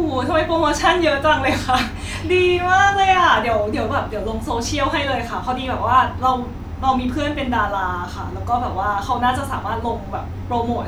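No technical faults occur at any point in the recording.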